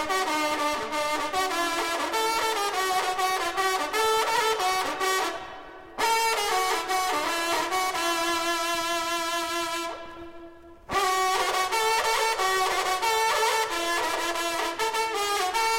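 No technical faults are audible.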